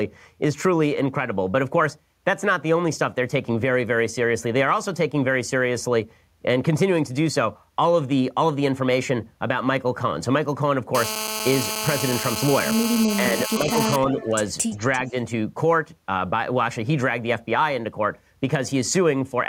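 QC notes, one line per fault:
10.95–13.96 s, GSM phone buzz: a hard, raspy buzz at 217 Hz, rich in harmonics, sits under the speech at about 6 dB below its level. The buzz stays nearly steady for the full three seconds and has nothing to do with the speech. A 2G handset near the equipment sends its radio signal in pulses 217 times a second, and the audio circuitry demodulates those pulses into a tone. The steady, unbroken pattern matches a phone holding a voice call.
13.05–13.69 s, speech suppressed in double talk: inside this span the speech drops in level in short pieces, adding up to roughly 300 ms, with the deepest dip around 5 dB. This overlaps the end of the buzz. The likely cause is both ends talking at once. The echo canceller could not separate this talker from the loudspeaker return, so it turned the outgoing speech down until the overlap ended.
14.2–14.25 s and 14.7–15.11 s, echo leak: a faint copy of the speech comes back 343 ms late, roughly 20 to 25 dB below the original. 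The first return is a brief scrap and the second lasts about 0.4 s. The likely cause is a far end playing the call on a loudspeaker whose echo canceller did not fully remove what its microphone picked up. That residue was sent back down the line as a delayed echo.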